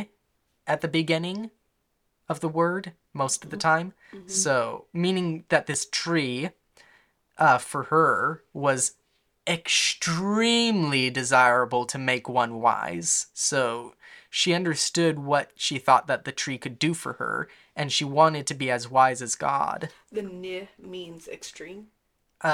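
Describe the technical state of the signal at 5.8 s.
A sudden voltage step, likely from a switch, plug, static discharge or driver glitch, entered the signal path between 5.74 and 5.76 s, just after "meaning that". The downstream circuitry shaped it into one brief pulse peaking at about 5 dB above the speech level. It is heard as a single sharp loud pop lasting roughly 20 ms, sitting on top of the speech, which continues underneath without interruption.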